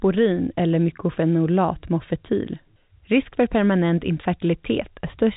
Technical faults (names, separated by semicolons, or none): none